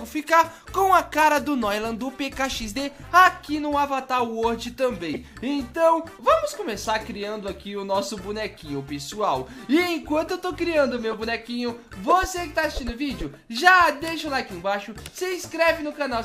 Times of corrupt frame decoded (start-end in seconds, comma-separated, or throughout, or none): 1.20-1.24, 5.13-5.17, 6.83-6.88, 11.11-11.14, 15.84